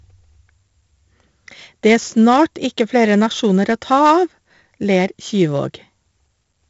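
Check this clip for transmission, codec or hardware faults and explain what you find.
One codec fault runs through the whole clip: 4-bit ADPCM compression. Each sample is coded as a coarse 4-bit step from a prediction, so a gritty hiss rides on every loud syllable and attacks smear. The damage is heavy, nothing reaches above 7.7 kHz, and it sounds like a 64 kbps stream.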